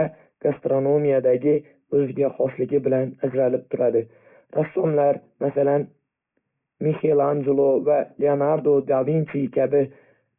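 A speech clip with aliasing throughout. Content above 3 kHz folds back as wrong, metallic tones, consistent with a 6 kHz resampling done without filtering. The folded energy sits roughly 30 dB down.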